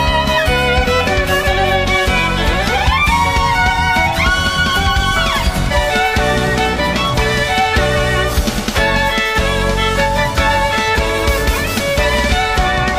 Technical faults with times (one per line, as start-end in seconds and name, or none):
3.21-3.26 compressed frames skipped
5.67-5.72 compressed frames skipped